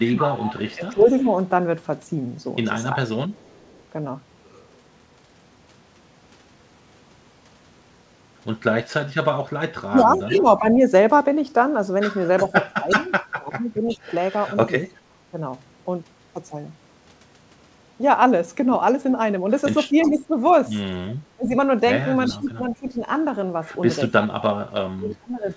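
Speech in three stretches, 0.0–3.33 s, 9.9–15.37 s and 19.92–25.55 s, dips by about 20 to 25 dB and breaks up in pieces, for roughly one to three seconds of lost level in each stretch. The likely cause is speech suppressed in double talk: with both ends talking at once, the echo canceller cannot tell this talker from loudspeaker echo and turns everything down. Overlapping those stretches, at 0.28–3.83 s, 10.01–13.97 s and 20.01–25.13 s, a faint delayed copy of the voice trails it by 356 ms, sitting around 15 to 20 dB below the speech. That is likely an echo leak, where a far-end loudspeaker's sound passes the canceller and is sent back. Nothing is heard above 8 kHz, which fits a G.722 call path.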